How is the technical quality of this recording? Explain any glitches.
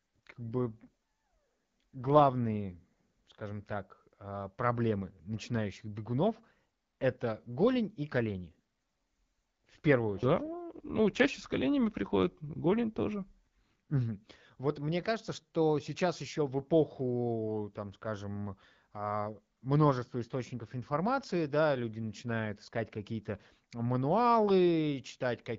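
The speech is carried on an AMR wideband link, with two stretches of degraded quality. AMR rate drops occur from 0.45 to 3.76 s, ending before "а проблемы начинающих бегунов", and from 8.46 to 11.94 s, between "это голень и" and "голень тоже". The network forced the codec to a lower mode, and the sound turns rougher and more synthetic, consistent with a step from 12.65 to 8.85 kbit/s.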